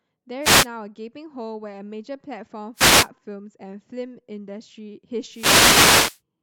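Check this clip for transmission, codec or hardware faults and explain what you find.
The clip has one recurring hardware fault. Wireless microphone noise hits occur at 0.41–0.67 s, 2.74–3.09 s and 5.30–6.21 s: reflections cancel the FM radio signal, so receiver noise swells into bursts of static over the speech.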